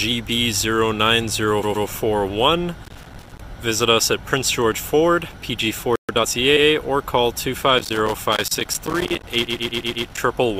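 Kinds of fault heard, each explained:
Repeated frames: a short run of compressed frames got played more than once, so the same slice of sound comes back like a stutter. At 1.63 s a 120 ms block plays twice more, adding 240 ms. At 6.57 s a 100 ms block repeats once. Worst is 9.47 s, where a 120 ms block loops five extra times, stretching things by 600 ms.
Loose connector crackle: a worn or dirty contact keeps making and breaking as it shifts, chopping the signal into a rough, scratchy crackle. You get a short burst from 2.84 to 3.41 s, then a much longer stretch from 7.78 to 10.18 s. That second one runs right across the final stutter, so the crackle and the repeats pile up together near the end.
Playback stall: at 5.96 s the sound just drops out mid-flow and stays silent for about 130 ms before it picks up again. The likely cause is the player running dry on data or its thread getting blocked for a moment. 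It's a brief gap but clearly noticeable. The audio simply cuts off and then carries on.
Time-compressed catch-up: right after that stall, from 6.09 to 6.35 s, the player claws back its backlog by snipping out tiny pieces and cross-fading over the joins. That section runs at about 1.5 times normal speed but keeps its pitch, so it sounds hurried rather than chipmunky. It settles back to normal pace just before the 6.57 s repeat.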